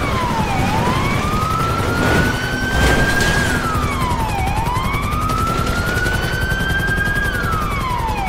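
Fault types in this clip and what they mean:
Overlapping chunks: the audio was handled in one-second blocks that each begin slightly before the previous one ends, so 6.5 ms plays twice at every join, giving a tick once a second from 0.60 s. Unlike a dropout, nothing is lost; a sliver repeats instead.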